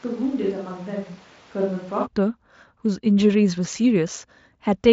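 From the start until 2.05 s, the speech is roomy and hollow, thin in the bass, about 5 dB quieter, with background noise roughly 25 dB below it, then it turns close and full. This is likely a switch to a distant microphone.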